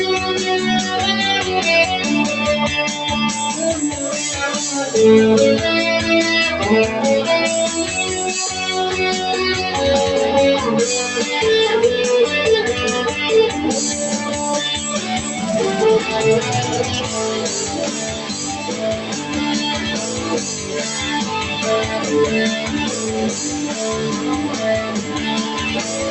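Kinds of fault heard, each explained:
Noise suppressor applied to music or sounds: A suppressor built for speech stays active throughout, treating sustained tones and ambience as noise. Held parts and tails sink by around 5 dB, so level pumps. On a spectrogram, sustained bands thin and flicker between brighter attacks.
DC step: The waveform's zero line jumps suddenly at 15.19, 18.44, 22.74 and 26.01 s, each heard as a low thump. The offset then drains away like a 5 Hz high-pass, showing as a baseline shift easing back to centre.
Sound cut by the noise suppressor: Here the suppressor pulls specific passages down harder, by about 5 dB, at 18.13 to 18.34 s, 18.6 to 19.31 s and 24.88 to 25.17 s. The waveform envelope dips and the spectrogram fades across frequencies.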